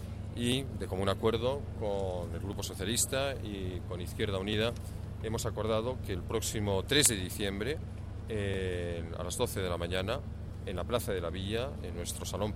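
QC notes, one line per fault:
0.52–10.54 s: periodic USB or driver dropouts. Short ticks recur every 2.0 s across this span, around seven in all. Each time roughly a millisecond of audio is skipped rather than filled, so the waveform jumps straight from one point to a later one. That discontinuity produces a brief click. The strict 2.0 s spacing indicates something regularly stalling the USB bus or audio driver, not a fault in the source signal.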